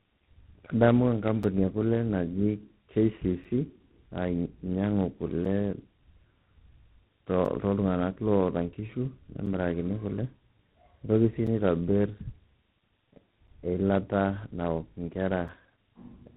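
From start to finish the speech carries tandem speech coding: it has passed through two speech coders in a row, and the character fits GSM full rate followed by G.726 at 24 kbit/s, with an A-law telephone link between them. The second coder re-encodes the first one's errors, so the voice sounds rough, muffled and warbly. On a spectrogram nothing appears above 3.9 kHz, and the harmonics look smeared and grainy rather than clean.

On top of this, a gap between chunks occurs every 2.0 s, at 1.43, 3.44, 5.45, 7.45 (just before "toltung'anak loata nkishu"), 9.46 (just after those words), 11.47, 13.47 (just before "eilata naok inkera") and 15.48 s. Each hole lasts about 6.5 ms, where the audio drops to silence at a chunk boundary before resuming. Each one is heard as a short hole in the sound. The waveform shows a short flat line, and the spectrogram shows a thin vertical empty stripe.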